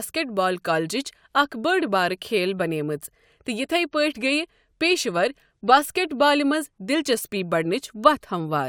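Speech, with no audible technical faults anywhere in the recording.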